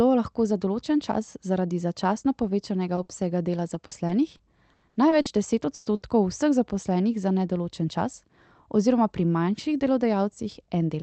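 Speech over an Opus call, with packet trouble clustered between about 3 and 6 s. At 2.95 to 2.99 s there's short concealed packet loss: 20 ms the decoder never got, patched by extending the last sound into a quick smear. Across that same stretch, 2.97 to 2.99 s, a lost packet was rebuilt from error correction, so that 20 ms plays from the rougher low-bitrate backup copy. The same rebuild happens at 3.09 to 3.11 s and 5.85 to 5.87 s. Bursts of packet loss hit at 3.03 to 3.11 s, 5.75 to 5.87 s and 5.95 to 6.03 s, dropping 60 ms, 100 ms and 60 ms. Each gets bridged by a fading held buzz or hiss, and the audio picks up further along. The worst part is 3.73 to 5.27 s, where repeated packet loss produces choppy sound with pieces missing. Seven gaps there total 280 ms, about 18% of the stretch, with the longest at 80 ms, and something like 150 ms of it is filled from backup copies. The top end rolling off around 8 kHz is just the call codec's bandwidth, consistent with roughly 32 kbps Opus.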